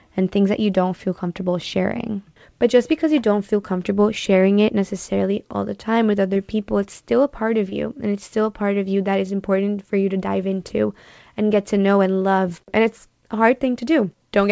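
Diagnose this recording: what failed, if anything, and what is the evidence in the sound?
Short concealed packet loss at 6.34–6.37 s after "all the time with", 7.69–7.74 s after "still a part of" and 10.68–10.71 s after "for you to dive". At the network stage, about 20 ms arrived too late each time, and the decoder extrapolated the preceding sound, leaving brief smears.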